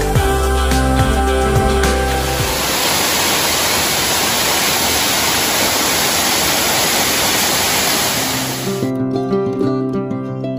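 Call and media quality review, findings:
Hard, raspy buzz 1.04–1.93 s, about 7 dB below signal, rich harmonics on a 217 Hz fundamental. GSM phone buzz: nearby 2G handset in a data burst; audio input stage rectifying its 217 Hz TDMA pulses.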